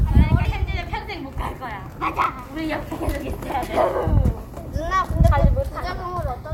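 At 2.22 to 2.26 s, and again at 3.50 to 3.54 s, there are chunks out of order. Each time, one chunk of about 21 ms arrived a single chunk late. It plays after the chunk that should follow it. No audio is missing, but the sequence is swapped. Each swap leaves three hard joins. The result is a brief jumbled stutter.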